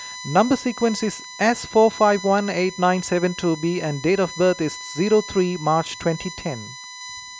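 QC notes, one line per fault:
Throughout: USB whine, a steady fixed-pitch tone sitting under the speech at roughly 15 dB below it. The fundamental is at 1 kHz, with the strongest component at 4 kHz, its fourth harmonic. The tone comes from the USB bus drawing current in regular 1 ms frames. That periodic load gets into the audio path through shared power or ground, so the frame rate and its multiples are heard directly as a whine.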